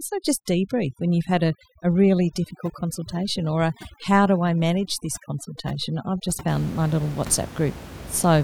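Speech carries overdone noise removal from 0.0 to 6.49 s: bands near the room noise, which sits about 15 dB below the voice, are pulled down, leaving near-silent gaps with twinkling specks. Unlike codec artefacts, the damage tracks the noise floor rather than the voice's loudest content.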